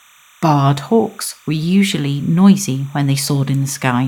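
Timecode bleed runs throughout this speech clip: a faint chirping warble near 1 and 2 kHz, roughly 35 dB below the speech, from 30-frame linear timecode leaking in from an adjacent track or cable.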